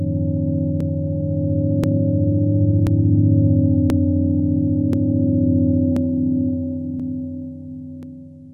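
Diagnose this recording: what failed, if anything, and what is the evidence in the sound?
The fault is overlapping chunks at the buffering stage. Stutters occur at 0.81–0.84, 1.84–1.87, 2.87–2.90, 3.90–3.93, 4.93–4.97, 5.97–6.00, 7.00–7.03 and 8.03–8.06 s. Each 1-second chunk starts 32 ms before the last ends. That slice plays twice at every join.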